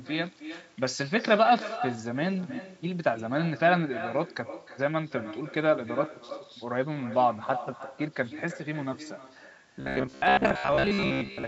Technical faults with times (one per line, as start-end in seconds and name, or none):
0.00-11.47 echo with no canceller
9.76-11.47 robotic sound from repeated short buffers